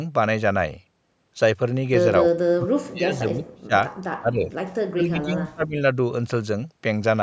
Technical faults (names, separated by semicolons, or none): speech suppressed in double talk